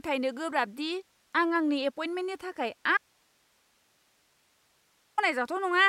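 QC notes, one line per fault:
2.97–5.18 s, audio dropout to a faint residue: the speech cuts off abruptly and leaves about 2.2 s of bare hiss, roughly 40 dB below the signal, before snapping back. The likely cause is a lost input while the downstream path stayed live.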